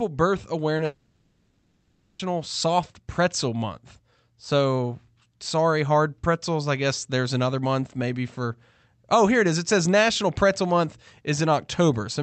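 At 0.77 s a short concealed packet loss occurs: about 20 ms of the call arrived too late for the decoder, so the receiver extended the preceding speech to cover the gap and then blended back, leaving a brief smear in the sound.

From 0.85 s to 2.21 s the audio is replaced for over a second by a synthetic continuation of the last sound, a buzzy, hissing tail that fades out and ends in a short moment of silence before real speech resumes with the intervening part missing. This is likely a long network dropout, where the connection stopped delivering packets and concealment had to stretch across the whole gap. The returning audio carries the Opus call path's top end, which stops around 8 kHz.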